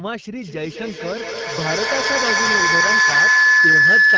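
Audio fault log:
0.41–4.18 s feedback howl: loop gain builds a tone near 1.5 kHz, about 11 dB above speech, with a loop delay of roughly 200 ms; shows as a bright horizontal spectrogram stripe and a swelling waveform.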